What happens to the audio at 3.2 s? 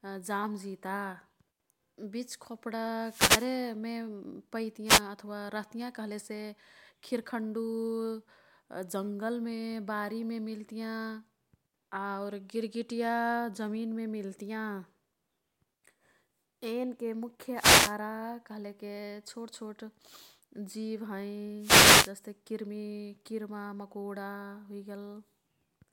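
A short swish of static washes over the speech from about 2.99 s to 3.58 s, a burst lasting roughly 0.6 s that partly masks the voice before clearing. It is a wireless microphone noise hit: the radio link from the analogue FM transmitter momentarily faded as reflected signal paths cancelled one another, so the receiver's own noise rose up through the audio until the signal recovered.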